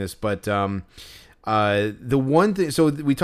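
Listening through this speech recording, nothing stood out as a technical problem at any point.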